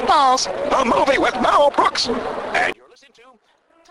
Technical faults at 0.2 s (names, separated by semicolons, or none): none